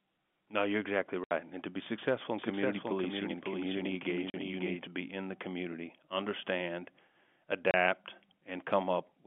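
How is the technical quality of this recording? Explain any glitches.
The recording has two kinds of glitch: short silent gaps and a stretch where the speech is heard twice. It comes through a telephone line coded as G.711, so the sound stays within roughly 150 Hz to 3.4 kHz.

Packet loss filled with silence occurs at 1.24 to 1.31 s (70 ms, just after "no you're exactly"), 4.30 to 4.34 s (40 ms) and 7.71 to 7.74 s (30 ms). Lost packets were replaced with silence, so the sound cuts out abruptly and can click. Because the gap lengths are multiples of 10 ms, they fit 10 ms packets. A concealment fault would smear or repeat the sound instead.

A doubled audio track runs from 2.39 to 4.87 s, between "to be successful in" and "be in the community". A second, full-band copy about 5 dB quieter trails by about half a second, likely from a second capture path or a misaligned edit. Unlike an echo or reverb, it has no decay or room colour, and it starts and stops abruptly.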